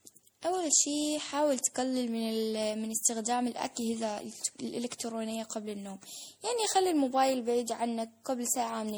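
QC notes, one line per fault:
Throughout, generation loss: the speech is swirly, smeared and hollow, with blurred attacks and accumulated noise and spectral holes, likely from about five MP3 decode-and-re-encode passes near 64 kbit/s, each requantising on a shifted frame grid so damage compounds.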